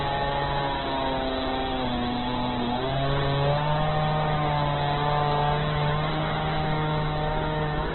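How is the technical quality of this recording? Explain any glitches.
The technical quality is poor, with one fault running through the whole clip. Throughout, the sound is rough, grainy and noisy, with nothing above about 4.1 kHz, so it is dull and narrow. This is likely heavy Opus compression at a very low bitrate, around 8 kbps. The encoder keeps each band's energy but, starved of bits, fills bands with folded or noise-like content, and its bandwidth collapses to narrowband.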